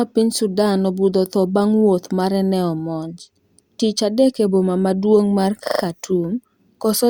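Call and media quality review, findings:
Stutter, 5.65 to 5.83 s, just after "e boma maduong mar". Repeated frames: a 40 ms compressed block replays four extra times, clip grows 160 ms. Probable component: encoder output or transport duplicating frames.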